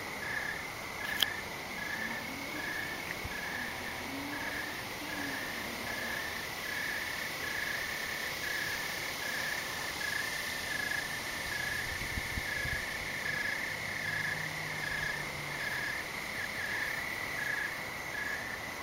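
A short stutter recurs at 3.85 to 4.05, 8.05 to 8.25, 12.25 to 12.45 and 16.45 to 16.65 s, each replaying 200 ms of audio. This is overlapping chunks: 4 s blocks each begin before the previous one ends, duplicating the seam.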